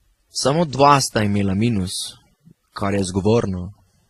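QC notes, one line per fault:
throughout transcoding between lossy codecs: speech with stacked artefacts and nothing above 14.1 kHz, likely a low-bitrate encode re-encoded through two further lossy codecs.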